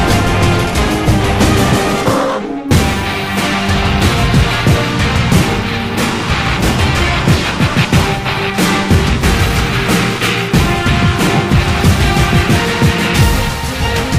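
Listening closely turned up nothing that stood out as a technical problem anywhere in the recording.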